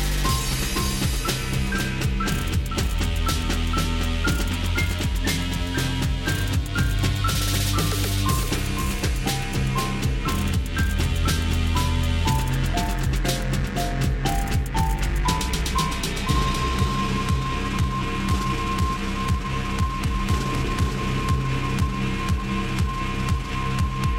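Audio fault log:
Throughout, doubled audio track: a second full-band copy trails the original by about half a second, roughly 5 dB quieter, with no decay or room colour to it. That's most likely the same feed captured again through a slower path.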